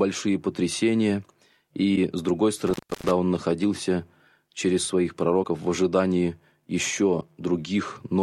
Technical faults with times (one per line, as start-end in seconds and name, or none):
1.95-1.98 broken MP3 bit reservoir
2.67-3.11 intermittent contact
5.42-5.45 broken MP3 bit reservoir
7.20-7.23 broken MP3 bit reservoir